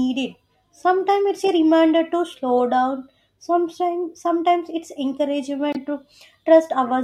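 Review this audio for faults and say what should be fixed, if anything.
Corrupt frame decoded at 2.59 s and from 5.73 to 5.77 s. Flipped bits sent energy to the wrong frequencies. The first is a quieter blip from one frame. The second is a louder burst across several frames. Check frames for errors and conceal damaged ones.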